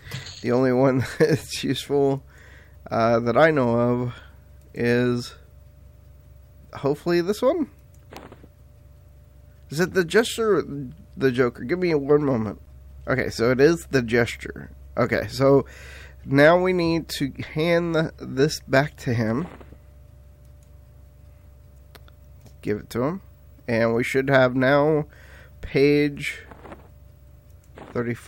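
At 8.17 s a single sharp snap cuts across the sound, a brief crack peaking somewhere near -15 dBFS. It is an electrical switching spike, likely caused by a nearby switch or discharge arcing and coupling a short burst into the audio line.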